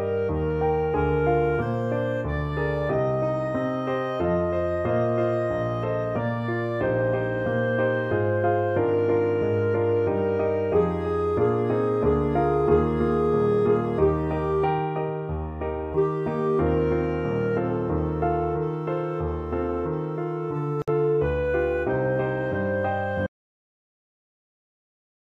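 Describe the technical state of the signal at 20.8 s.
Two separately encoded pieces of the audio were joined here without trimming, so each encoder's start-up delay and the padded last frame of the earlier piece remain in the stream. The result is a gap at a join of encoded pieces from 20.82 to 20.88 s: a gap of about 58 ms cut into otherwise continuous sound, with edges that the codec smears, so the truly silent part is shorter. The sound then resumes from exactly where it stopped, as though briefly paused.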